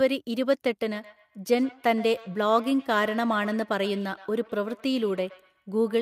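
Speech, with feedback echo between two devices from 0.94 s to the end. Each word returns about a tenth of a second later, at its loudest about 20 dB below the voice. One device replays the other's audio, whose microphone recaptures it, and neither echo canceller removes it.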